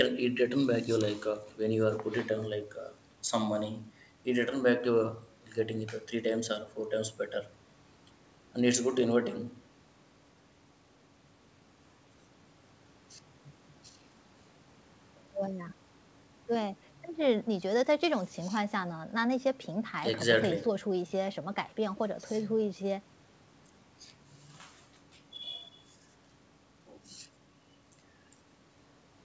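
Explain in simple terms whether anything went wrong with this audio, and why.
Nothing stood out on listening: the speech has the ordinary sound of audio sent over a call connection, where the highest frequencies above 8 kHz are absent as expected, and nothing went wrong.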